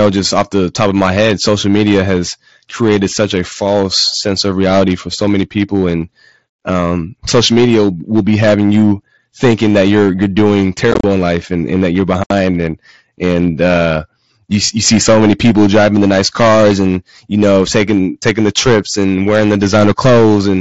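Hard clipping runs through the whole clip: the level is pushed about 10 dB past full scale, so about 4% of the samples get flattened into a harsh, crackly fuzz. From 10.92 to 11.04 s there's unconcealed Bluetooth headset packet loss, about 75 ms of speech lost scattered over 120 ms in runs of up to 30 ms, which chops the speech with abrupt gaps. The same kind of dropout returns at 12.24 to 12.31 s, with about 68 ms of speech punched out abruptly. Both bursts ride on top of the mSBC link's band-limited sound.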